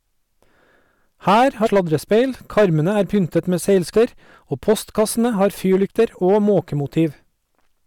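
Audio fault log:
Throughout, hard clipping: the speech is driven about 9 dB past what the chain can pass, so a few percent of samples get their peaks sliced flat. Those squared-off tops spray high harmonics, giving a harsh fuzz on the louder syllables across the clip.
1.65–1.67 s, 3.93 s, damaged data in a compressed stream: short blips, the second right after "karmene er pyntet med". Corrupted bytes throw the decoder off its frames, it hunts for the next header and resyncs.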